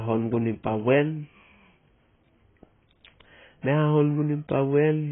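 AAC compression damage runs throughout this speech recording: nothing is present above about 3.7 kHz, so the sound is dull and muffled, with a warbling, smeared texture on sustained sounds and fizzy sibilants. The likely cause is heavy AAC-LC encoding at a low rate, consistent with around 16 kbps. Short of bits, the encoder lowers its cut-off and coarsely quantises the remaining spectrum, leaving gaps that shift from frame to frame.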